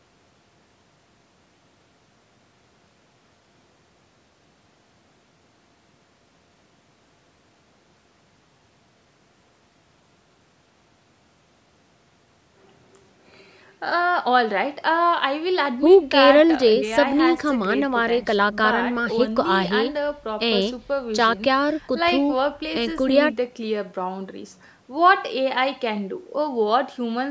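Nothing's actually wrong in this speech recording: it simply carries the usual sound of a call's microphone processing, with the deepest bass trimmed away and nothing above 8 kHz, just as you'd expect from that path.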